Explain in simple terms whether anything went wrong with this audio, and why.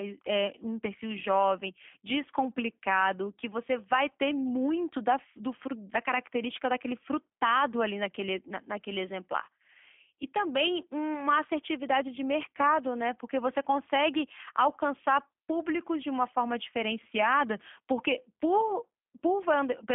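Yes, something's off: the whole recording has been through the G.729 codec, a squeezed-down phone-call format. It rebuilds speech from a rough model of the voice, so everything sounds slightly rough and synthetic, and with nothing above about 3.5 kHz it's muffled and thin.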